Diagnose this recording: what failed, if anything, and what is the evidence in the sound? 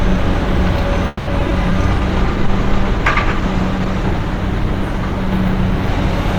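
Network stage: repeated packet loss (robotic sound) from 1.07 to 1.74 s. Five gaps arrive in quick succession, the longest about 200 ms. The receiver fills some with extended copies of the preceding audio, giving a choppy texture, while other stretches simply drop out.

Codec stage, driven by a fall in the call's bandwidth estimate: a call bitrate drop from 1.92 s to the end. The audio turns coarse, watery and dull, with high frequencies stripped away. That fits the encoder falling from around 128 kbps to about 15 kbps, where it stays for roughly two seconds.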